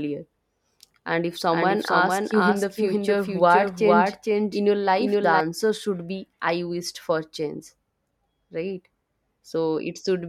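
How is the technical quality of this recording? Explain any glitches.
The recording has one clear glitch. From 1.51 to 5.41 s there's a doubled audio track: the speech plays twice, a second copy trailing by about half a second at roughly the same level. It's likely a slower second capture path or an edit leaving two unaligned copies, so the echo is clean, with no room tail, and cuts in and out abruptly.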